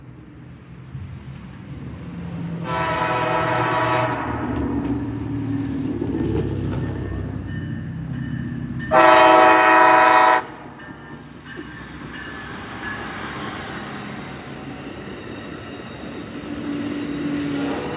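No technical faults can be heard anywhere in the audio. Nothing in the sound calls for a time, a value or an explanation.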